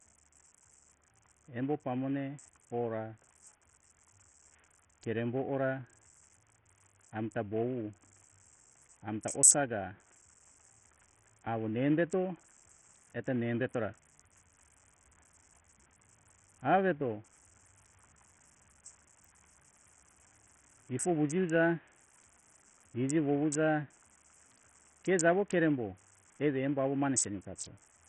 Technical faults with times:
0.00-28.08 Bluetooth SBC compression

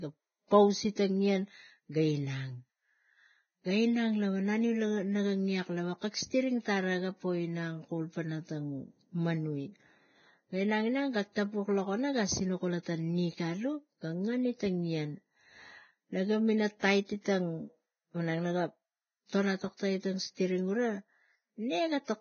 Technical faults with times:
0.00-22.21 Vorbis compression

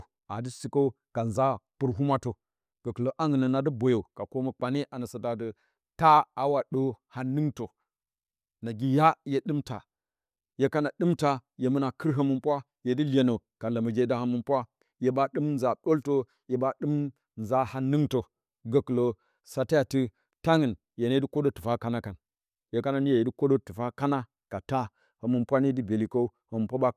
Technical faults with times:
none

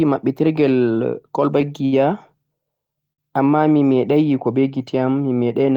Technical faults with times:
1.85-1.94 short stall from a late packet
3.13-3.20 short stall from a late packet

